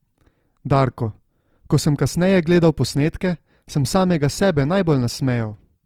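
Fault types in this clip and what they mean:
Opus compression: the speech sounds rough and grainy throughout, with noise filling thin bands, likely from low-bitrate Opus music-mode coding near 24 kbps.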